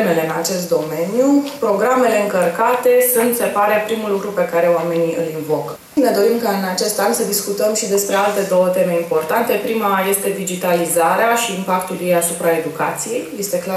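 Nothing in the audio calls for comment, with no dropouts, glitches or other technical faults at any point along the way.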